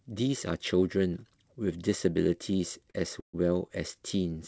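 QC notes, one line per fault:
2.90–2.96 s, short stall from a late packet: a packet arrived late, so the last sound is held about 42 ms, then resumes where it left off with nothing lost.
3.20–3.35 s, call audio freeze: the sound stops and fades into about 110 ms of silence, likely from a jitter buffer running dry, then resumes after 132 ms with nothing lost.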